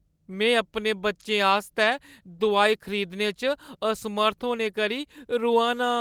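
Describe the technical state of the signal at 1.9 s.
At 1.9 s the speech signal is intact, with no audible fault at that moment.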